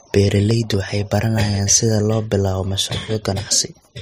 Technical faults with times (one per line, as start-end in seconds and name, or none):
0.51-0.74 processor overload crackle